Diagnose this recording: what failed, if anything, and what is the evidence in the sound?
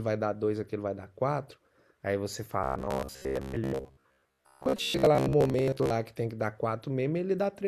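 Robotic sound from repeated short buffers runs from 2.64 to 5.90 s, turning the speech into a rigid metallic buzz at 66.8 Hz. That points to a starved driver or buffer stage, likely looping a roughly 15 ms chunk and skipping most of the real audio.

There's also a corrupt frame decoded at the codec stage, twice: one from 3.22 to 3.25 s peaking at about -20 dBFS, and a quieter one, about -30 dBFS, from 4.76 to 4.79 s. Flipped bits put energy at wrong frequencies.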